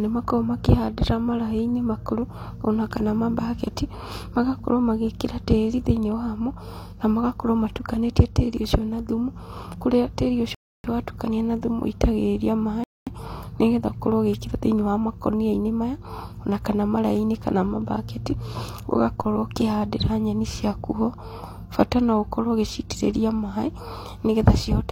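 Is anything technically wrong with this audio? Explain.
Yes. Two rebuffering stalls occur, at 10.55 to 10.84 s and 12.84 to 13.07 s. Playback ran dry, went silent for about 0.3 s and 0.23 s, then resumed seamlessly. A DC step at 19.21 s jumps the zero line, heard as a low thump. The offset then decays away through a 2 Hz high-pass.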